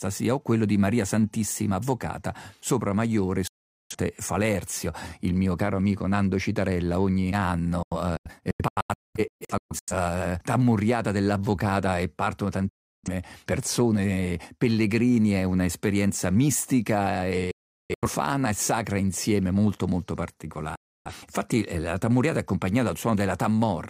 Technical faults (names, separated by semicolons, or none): digital broadcast dropout